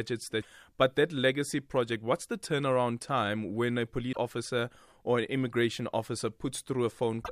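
At 0.38 to 0.45 s, just before "but that legacy project", a short blip breaks into the speech. It returns at 4.09 to 4.17 s, right after "turnaround time when a", and again at 7.20 to 7.29 s. Each is damaged data in a compressed stream. Bytes in those frames are corrupted. The decoder misreads them, loses sync and hunts for the next valid frame header. The result is a brief glitch of garbled sound.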